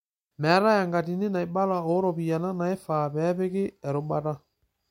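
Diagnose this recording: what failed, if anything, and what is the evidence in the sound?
Nothing failed: the recording shows no fault at any stage.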